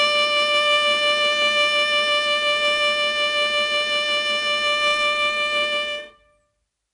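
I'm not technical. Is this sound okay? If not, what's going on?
No. The music has 4-bit ADPCM compression from start to finish. Each sample is stored as a tiny step from a guess. The coarse steps leave a gritty hiss on every loud passage. Sharp attacks sound rough. Nothing above 10.8 kHz remains, so it sounds dull.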